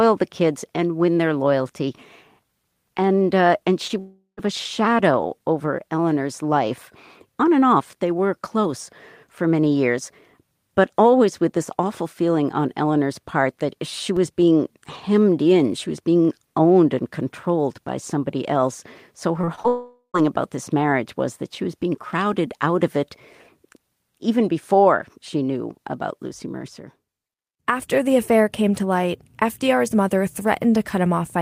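A speech recording carrying network and level faults. At 3.87 to 3.91 s there is short concealed packet loss: about 20 ms was synthesised from the preceding sound, showing as a brief smeared patch in the spectrogram. From 3.99 to 4.39 s comes a fading continuation of the last sound ending in about 110 ms of silence, whose likely cause is a long network dropout; the waveform tapers to a flat gap before the speech resumes. At 14.17 s a DC step gives a low thump, seen as a sudden baseline jump that then decays, consistent with a 2 Hz high-pass. Between 19.41 and 19.66 s, repeated packet loss produces choppy sound, with four gaps of up to 24 ms patched over about 28% of that stretch, seen as striped, repetitive harmonics. At 19.68 to 20.16 s a second fading continuation ends in about 90 ms of silence, again a likely long network dropout, appearing as another decaying, then empty, region.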